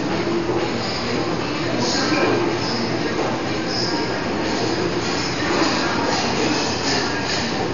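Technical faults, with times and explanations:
Throughout, Dolby Digital compression: the audio is dull and heavily damaged, with nothing above about 6.9 kHz and a rough, fluttering noise clinging around tonal parts. The likely cause is a low-bitrate AC-3 style encode, which fits a rate near 48 kbps. The encoder cut the band short and left many frequency lines without mantissa bits, so the decoder filled those gaps with dither noise.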